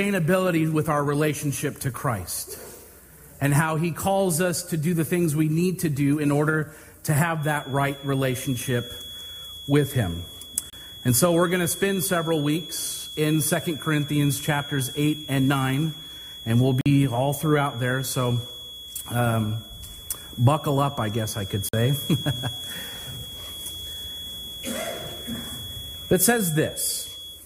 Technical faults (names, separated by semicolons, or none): feedback whistle; block of digital silence